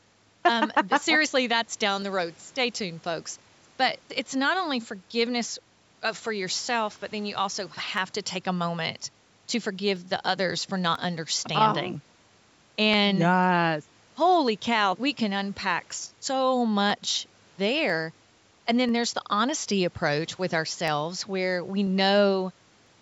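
Speech, with a regular click roughly every 0.99 s from 1.03 s to 22.87 s, about twenty in all. That steady tick points to likely clock drift buffer slips: two clocks some 300 ppm apart, so roughly fifteen samples get dropped or repeated each time. The call-style capture tops out at 8 kHz.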